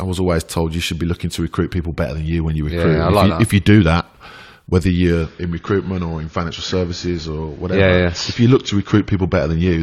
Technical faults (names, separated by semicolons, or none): adaptive stream at a lower bitrate